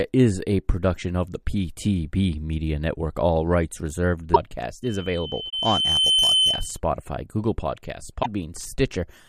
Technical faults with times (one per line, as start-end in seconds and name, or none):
4.33-4.36 broken MP3 bit reservoir
4.83-6.80 loudspeaker feedback squeal
5.49-5.53 broken MP3 bit reservoir
8.22-8.26 broken MP3 bit reservoir